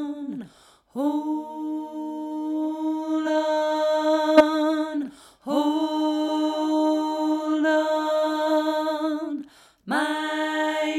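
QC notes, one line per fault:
3.25 s, compressed frames skipped: around 50 ms of audio is missing, so the sound jumps ahead.
4.37–4.41 s, corrupt frame decoded: a couple of damaged frames play with misplaced spectral energy, giving a short error that peaks near -5 dBFS.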